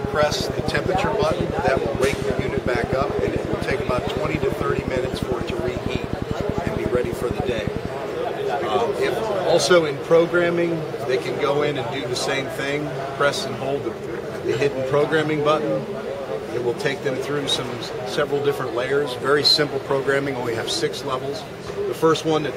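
A train of clicks runs from 0.05 s to 7.86 s. It ticks at a steady 11.1 clicks per second, with even spacing throughout. That adds up to about a hundred clicks. Each one has much the same sharp shape. They stand well above the sound, roughly 10 dB louder. They stay audible in the quiet gaps too. The regular pulsing likely comes from interference from nearby equipment or a faulty connection or power supply.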